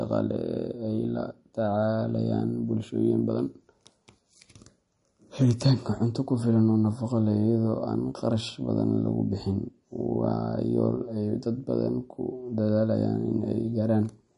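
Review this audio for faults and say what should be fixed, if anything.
Throughout the speech there is plainly audible watery swirling, with nothing above 10.6 kHz, likely MP3 compression at a low bitrate near 40 kbps. Unlike a plain low-pass filter, weak frequency lines flicker on and off between frames, adding metallic chirps to s sounds and smearing attacks. Keep the original file, or encode at a much higher bitrate.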